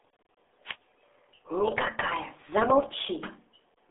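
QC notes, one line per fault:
throughout, RealAudio 14.4 codec: the speech comes across muffled and gargly, squeezed into a narrow 250 Hz to 3.5 kHz band with nothing at all above 3.8 kHz. That heavy, bubbly smearing is the codec starving the signal, which fits an 8 kbit/s dial-up-era stream.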